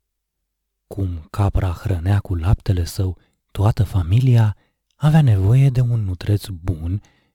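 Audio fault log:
throughout, crude rate conversion: samples repeated without filtering, consistent with a 44.1 kHz to 48 kHz change, adding a gritty inharmonic fizz roughly 35 dB below the speech.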